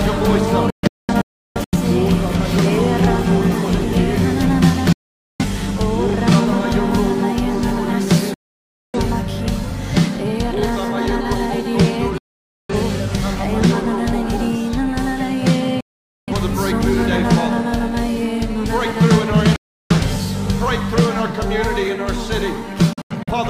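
Digital broadcast dropouts mute the audio seven times: 0.70, 4.93, 8.34, 12.18, 15.81, 19.56 and 22.93 s. Corrupt frames trigger quick 3 ms fades to silence. The first and last break into several short holes.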